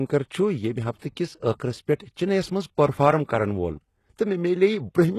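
Across the whole recording the speech carries plainly audible damage that points to HE-AAC compression, likely at around 16 kbps. Nothing sits above 12.3 kHz, yet the treble is rebuilt from copied lower bands, so s sounds come out gritty and metallic rather than simply dulled as with a plain low-pass.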